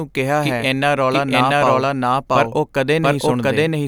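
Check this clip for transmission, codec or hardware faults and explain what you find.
A doubled audio track runs through the whole clip. Every stretch of speech is followed about 0.7 s later by a second copy at roughly the same loudness, so the two layers overlap and compete, and the late copy stays clean and full-band with no fade or room colour, unlike a natural echo. The likely cause is the same signal being captured a second time through a slower path, or an edit leaving two copies out of step.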